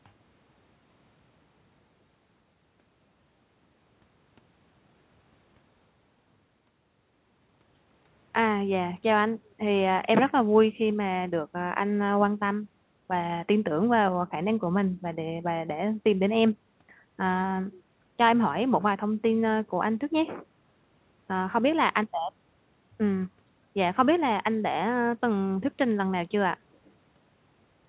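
Speech, with no technical fault anywhere in the recording. It has come through a call path that is working as it should, and nothing is heard above 4 kHz, which fits a narrowband telephone codec such as G.711.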